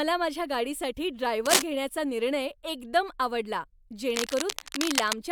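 Cable scratch noise appears at 1.46 to 1.62 s, just after "माझ्या गाडीसाठी", as a brief scratchy crackle standing a little above the speech, and again from 4.10 to 5.15 s as a longer, quieter rustle sitting somewhat below it. The cause is likely a worn cable or connector being moved, so its contact resistance jumps about and injects dense, irregular bursts of noise over the speech.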